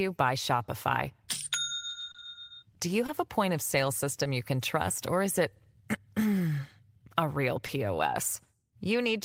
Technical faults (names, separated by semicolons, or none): short concealed packet loss